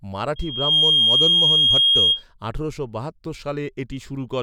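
From 0.36 s a pure tone near 3.2 kHz swells within half a second into a squeal roughly 10 dB above the speech, stopping at 2.23 s before "আঠারোশো বাহাত্তর". This loudspeaker feedback squeal arises because the microphone picks up its own loudspeaker, pushing the loop gain above one at that pitch.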